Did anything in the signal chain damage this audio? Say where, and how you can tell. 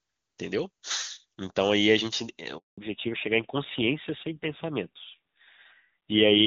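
Yes. At the network stage there is a handover gap from 2.58 to 2.78 s: the sound fades within milliseconds and stays silent for 200 ms until the new link starts. It isn't a dropout from clipping or a buffer glitch, because there is no click or repeated fragment, just a clean hole while no frames arrived.

From 2.78 s to the end the call shows fallback to narrowband at the codec stage. Before the gap the HD Voice AMR-WB path sounds clean and extended. Afterwards nothing remains above 4 kHz, and the tone turns dull and rougher, which fits a low-rate AMR-NB mode near 7.4 kbit/s. A low-pass filter would sound smooth, not grainy like this.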